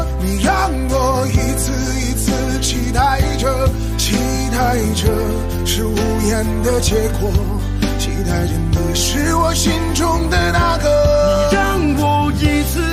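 No technical faults can be heard anywhere in the recording.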